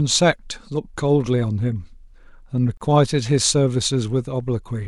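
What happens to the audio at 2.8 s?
Two separately encoded pieces of the speech were joined without trimming the encoder delay and last-frame padding, so a gap at a join of encoded pieces opens from 2.77 to 2.81 s. The gap is about 35 ms. Its edges are smeared by the codec, and the speech then resumes exactly where it stopped, with nothing lost.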